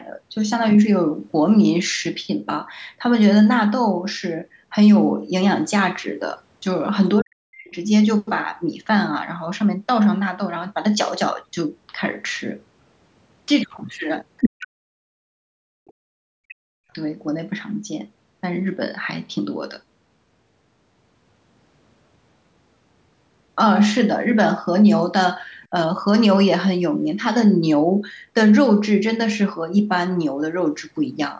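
From 7.21 to 7.74 s the speech drops sharply, falling by roughly 40 dB at its deepest, which is most likely speech suppressed in double talk: the echo canceller appears to have mistaken simultaneous talk for loudspeaker echo and attenuated everything. At 14.4 to 14.5 s a brief burst of the other side's voice leaking through appears at about the same level as the talker, consistent with residual echo the canceller failed to remove. Suppression then returns in pieces, at 14.45 to 14.85 s, 15.02 to 15.11 s, and for about 1.5 s from 15.29 to 16.8 s, each time pulling the talker down by roughly 40 dB. A second, very faint scrap of leakage, some 40 dB below the speech, sits at 25.63 to 25.67 s.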